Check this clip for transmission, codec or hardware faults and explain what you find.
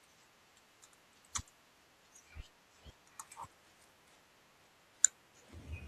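Nothing stood out on listening to this speech recording.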